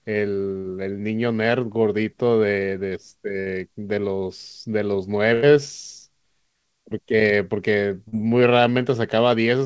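A burst of packet loss hits at 0.58 to 0.66 s, 3.40 to 3.48 s and 5.34 to 5.44 s. Several packets in a row were lost or arrived too late, so the receiver stretched the last sound for about 60, 60 and 84 ms while fading it. The speech then resumes with 60, 60 and 80 ms skipped.

Short concealed packet loss follows at 8.08 to 8.14 s. Here 40 ms never reached the decoder in time. The receiver filled the hole by continuing the preceding sound and blending back into the real audio, which is heard as a brief smear within a band that stops at 8 kHz.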